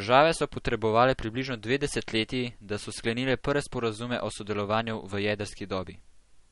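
Throughout, the speech sounds watery and swirly, with nothing above 11.2 kHz, likely from MP3 compression starved of bits, fitting a bitrate near 48 kbps.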